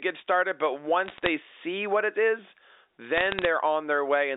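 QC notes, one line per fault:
1.06–1.29 s, bit errors on a digital phone line: between "started but" and "see what it is", sharp isolated ticks crackle over the speech. Single flipped sign or high bits each corrupt one A-law sample. Unlike packet loss, nothing drops out or smears.
3.17–3.45 s, bit errors on a digital phone line: the same sparse crackle returns at an error rate of roughly a fifth of a percent. The 300 Hz–3.7 kHz telephone band and the speech underneath carry on unbroken around each tick.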